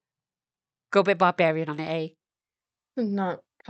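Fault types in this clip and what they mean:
No faults detected in this speech; the call path behaves as expected, with its band limit audible near 8 kHz.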